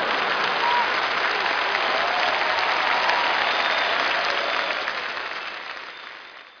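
No technical faults are audible.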